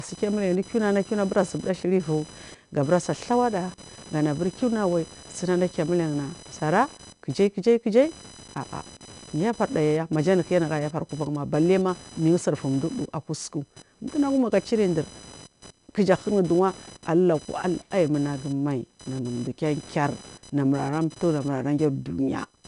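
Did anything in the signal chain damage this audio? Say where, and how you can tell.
Yes. In the analogue wiring, computer activity noise runs through the whole clip: a buzzing pulse train around 1 kHz, roughly 20 dB below the speech. Processor and peripheral load is modulating the shared ground.

At the codec stage, 4-bit ADPCM compression is plainly audible throughout as gritty hiss riding the speech level. Nothing above 10.7 kHz survives, consistent with roughly 89 kbps coding.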